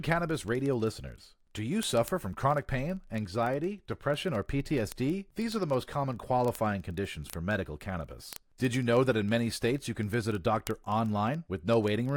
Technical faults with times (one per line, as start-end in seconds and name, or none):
0.13-12.16 word clock ticks